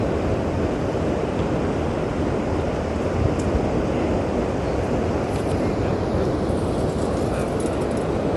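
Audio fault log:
Throughout: Bluetooth LC3 compression, likely. Nothing comes through above 11.5 kHz, and the top that's left has a grainy, breathy fizz rather than real detail. That's what a transform codec does when it runs short of bits: it drops most of the upper spectrum and patches the gaps with shaped noise. The damage is plainly audible, which fits a fairly lean LC3 stream of around 48 kbps working in 10 ms frames.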